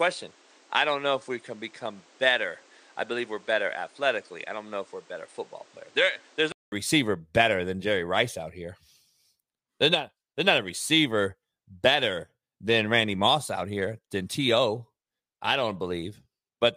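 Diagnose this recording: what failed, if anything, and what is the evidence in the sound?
The first 6.72 s sound like an input switched to a poorer device. The band stops dead around 9.5 kHz, the level sits about 5 dB lower, and there's a different noise floor roughly 30 dB under the signal. Then there's a 200 ms gap, and right at "receiver better than" the full bandwidth and level come back. That points to the driver or device-routing stage, likely the system grabbing a secondary input at the start before handing over to the proper microphone.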